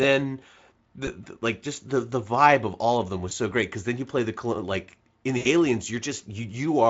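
At 1.05 to 1.12 s, just before "the like just the", and at 3.29 to 3.33 s, between "all of them was" and "so great because then", VoIP packet loss concealed by the speech codec fits one lost 20 ms frame each. At 5.37 to 5.48 s the loss reaches about 80 ms. Unlike a silent dropout, the decoder fills each gap by extending its last pitch and filter at falling gain, which smears the speech over the Speex-coded audio.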